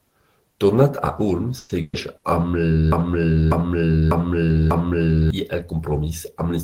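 Three bursts of packet loss hit the speech at 1.57 to 1.72 s, 1.81 to 1.96 s and 2.17 to 2.26 s, filled for about 120, 120 and 60 ms. The concealment holds the last sound as a fading buzz or hiss, seen as smeared horizontal streaks that dim before an abrupt jump onward.

From 2.92 to 5.30 s a broken-record loop repeats one 0.6 s fragment four times back to back, likely from a stalled stream resending its last buffer. The waveform and spectrogram show identical blocks tiled end to end, with the intervening speech lost.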